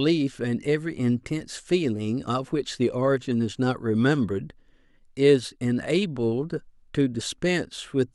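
At 2.28 s the speech has a tiny skip where an overlap between stream segments removed a few milliseconds of audio, consistent with 6-second segments.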